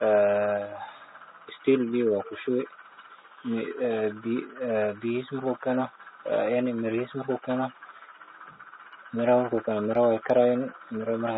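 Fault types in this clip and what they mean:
AAC compression: throughout, the speech sounds dull and smeared with fizzy sibilants, likely low-bitrate AAC-LC near 24 kbps cutting high bands and coarsely quantising the rest.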